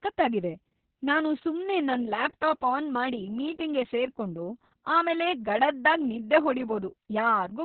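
The clip is speech, and it carries heavy Opus voice compression from start to finish. Nothing is present above about 4.2 kHz, so the sound is narrowband and muffled, like an old phone line. The voice is hoarse and slightly robotic. That comes from the linear-prediction coder rebuilding the excitation very coarsely. The damage points to SILK-only coding at a very low bitrate, around 6 kbps.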